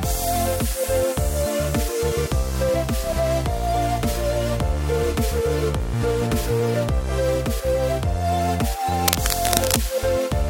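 From 9.03 to 9.81 s a burst of cable scratch noise sits over the sound, only slightly below its level: dense, irregular crackling and rustling. The likely cause is a worn cable or connector being moved, its contact resistance fluctuating rapidly.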